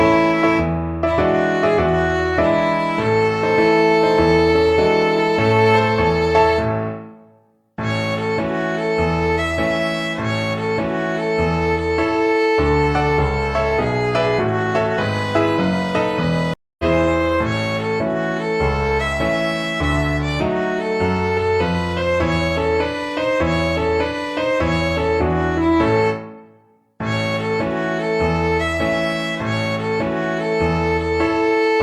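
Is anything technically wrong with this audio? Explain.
Yes. A stream reconnect at 16.54–16.84 s: the connection dropped, leaving about 250 ms of silence, then a fresh decoder resumed roughly a fifth of a second further on.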